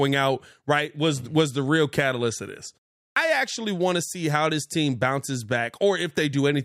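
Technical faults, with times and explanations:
3.09–3.16 s, clipped start after a pause: after a gap of about 0.39 s the output path seems to have gone to sleep and took 74 ms to wake, so the speech jumps in abruptly with its first sounds missing.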